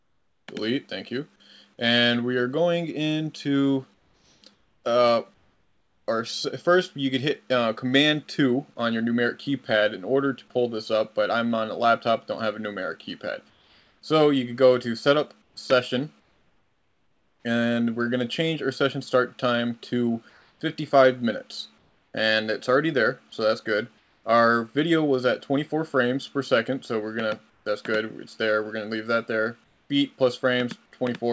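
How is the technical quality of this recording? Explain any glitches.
Comfort noise in place of the background recurs in eight pauses: 0.0–0.48, 3.94–6.08, 13.50–14.02, 15.42–17.44, 20.30–22.14, 23.98–24.24, 27.50–27.66 and 29.64–29.90 s. The likely cause is discontinuous transmission: the sender stopped sending in quiet stretches, and the receiver filled them with synthetic noise. The real background gives way to a flat, detail-free hiss, about 3 to 9 dB quieter where measurable.

Nothing is heard above 8 kHz, which fits a wideband call codec such as G.722 at 64 kbps.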